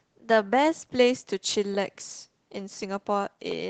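No technical faults can be heard in this speech clip, which comes through an Opus call path at about 20 kbps.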